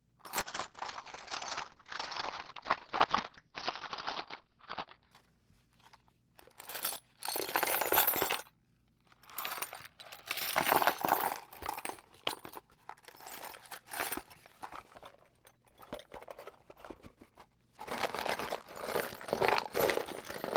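From 0.42 to 5.17 s, a call bitrate drop makes the sound coarse and muffled. The top end stops near 6 kHz, which fits a fall from about 32 to 7 kbps.

Chunks out of order occur at 2.96 to 3.04 s and at 6.84 to 6.96 s. Delayed 40 ms chunks play out of sequence, giving brief jumbled moments.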